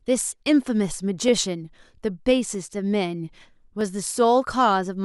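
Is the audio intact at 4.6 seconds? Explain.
Yes, the speech at 4.6 seconds plays through intact, with no audible fault at that moment.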